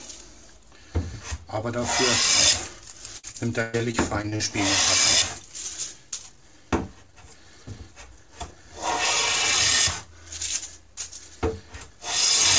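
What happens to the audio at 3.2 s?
At 3.2 s a burst of repeated packet loss (robotic sound) begins. It runs from 3.18 s to 4.42 s. Packets went missing again and again over this stretch. Eight gaps open up, the longest about 114 ms. Each hole is patched by stretching out the sound that came just before it. About a quarter of the span is this filled-in material. The result is choppy and robotic, with pieces of the audio missing.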